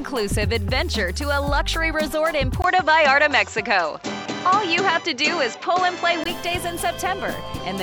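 At 2.62 s a gap of 20 ms appears. The sound then turns duller, with nothing above 7.6 kHz, a level shift of about 5 dB, and a faint new background noise. It clears again at 6.26 s. The likely cause is an input switched to a poorer device.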